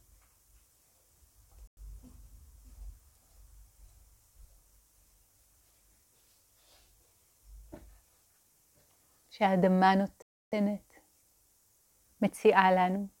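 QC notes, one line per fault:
1.67 s and 10.22 s, Bluetooth stall: sound cuts to clean silence for about 0.1 s, then about 0.3 s, before resuming. The likely cause is a wireless buffer running dry while delayed packets were resent. The gaps are silent, not crackling or repeated, which separates this from a codec glitch.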